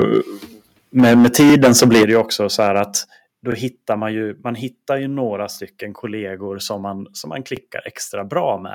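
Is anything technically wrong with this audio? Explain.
Yes. Microphone overload, likely from input gain set too high, flattens peaks at 0.0–0.18 s (about 4 dB over), 0.98–2.20 s (about 14 dB, roughly a fifth of samples) and 2.59–2.80 s (about 3 dB). It sounds harshly crackly, with squared-off waveform tops.

The microphone volume is stepped down, likely by the call software reacting to clipping, at 1.00 s (about 2 dB), 2.03 s (about 8 dB) and 3.05 s (about 5 dB, before "då hittar man ju"). Each is a sudden level drop, seen as a step in the waveform envelope.

Overlapping chunks at 2-second joins replay 23 ms at 1.50–1.52, 3.52–3.54 (before "hittar man ju man"), 5.54–5.57 and 7.57–7.59 s (after "som man som man"). Each is a click or stutter, seen as a vertical seam on the spectrogram.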